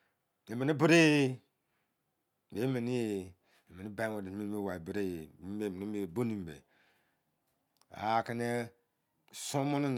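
Nothing technically wrong turns up in this speech recording; there's no fault to point to anywhere along it.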